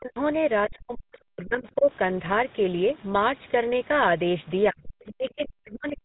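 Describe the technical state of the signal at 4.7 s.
At 4.71 s the speech drops out until 4.82 s, falling by roughly 35 dB. This is speech suppressed in double talk. The likely cause is an echo canceller that could not separate the talker from overlapping far-end echo and turned both down.

The GSM full-rate codec colours this moment too. It rebuilds the voice from a vocal-tract model and a sparse pulse excitation, which gives a plainly audible buzzy, gravelly texture. Nothing is left above about 3.9 kHz.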